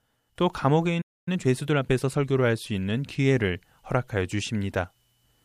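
At 1.01 s the speech cuts out in mid-flow. Silence holds until 1.28 s, a gap of about 0.25 s. This is a playback stall. The player most likely ran short of data, or its output thread was held up, so nothing reached the output. The break is simply an unnatural hole in the middle of running speech.

From 1.28 s to 2.28 s the speech runs hurried. This is time-compressed catch-up. After the stall, the player carried a backlog and worked it off. It removed short slices of audio and cross-faded the joins. The result plays at 1.25 times normal speed for one second. Pitch stays where it should. Syllables sound crowded together until normal pacing resumes.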